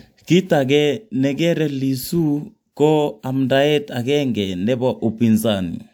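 Speech recording with no technical faults to report.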